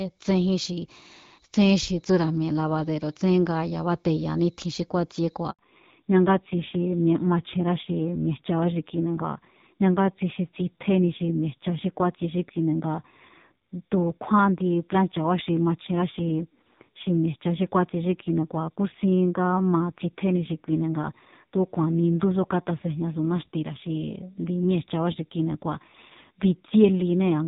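A network handover at 5.51 s leaves an 80 ms handover gap in this speech recording: no frames arrive, so the sound cuts out until 5.59 s. Immediately afterwards the call falls back to narrowband. The link drops from HD Voice to a narrowband codec for the rest of the clip, removing everything above 4 kHz, so the speech turns dull and rough, consistent with low-rate AMR-NB around 5.9 kbit/s after lighter wideband coding before the switch.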